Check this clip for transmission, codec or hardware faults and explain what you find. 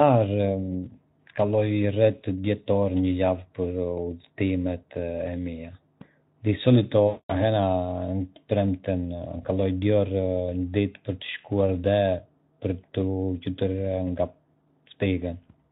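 One transmission fault, in this speech clip. From 7.08 to 7.33 s there is VoIP packet loss concealed by the speech codec. About 220 ms of packets failed to arrive, consistent with a run of 20 ms Speex frames. The decoder filled the gap by repeating its last pitch and vocal-tract filter at falling gain. The sound smears into a buzzy tone or coloured noise that fades, and stays weak briefly after real packets resume. The Speex coding itself shows only light damage.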